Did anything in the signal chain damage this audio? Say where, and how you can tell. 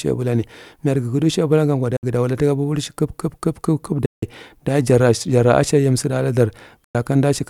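Yes. Likely Bluetooth dropouts on the wireless playback link: late packets were discarded, leaving silences of 61, 163 and 102 ms at 1.96, 4.06 and 6.84 s, with speech resuming as if it had played on.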